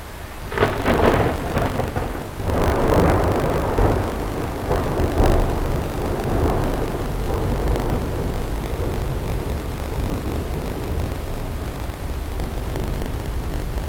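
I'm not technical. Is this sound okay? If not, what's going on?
No. Buffer tearing runs through the whole clip, from start to finish. The program feeding audio to the playback hardware has slipped out of step with it, so a small slice of each chunk replays sound from a fraction of a second earlier, with abrupt joins either side. Those joins repeat 50 times per second, producing the steady robotic buzz you hear whenever something is sounding. The rate points to 20 ms chunks.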